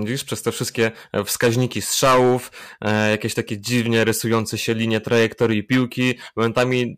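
Hard clipping runs through the whole speech clip. The signal is driven about 13 dB past what the stage can carry, so every loud peak is sliced off flat, with a few percent of samples sitting at the ceiling. Those squared tops add a spray of high harmonics well above the natural spectrum. With this much overload the result is a harsh, buzzy fuzz on each stressed syllable and loud onset, not just an occasional crackle.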